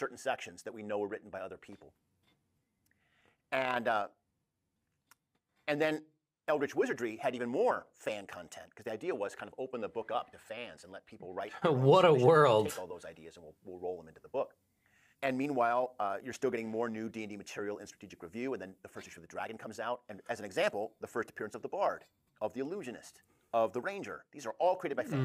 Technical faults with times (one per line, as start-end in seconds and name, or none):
none